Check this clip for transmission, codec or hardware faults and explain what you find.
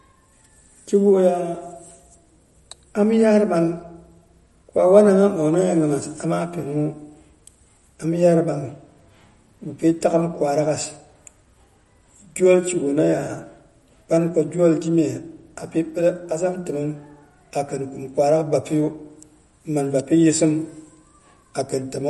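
There is one fault, audible throughout the speech: MP3 compression damage. Nothing is present above 11.8 kHz, and weak frequency lines drop in and out between frames, giving a watery, swirly texture with chirpy s sounds. This points to a low bitrate, around 46 kbps, as the likely cause.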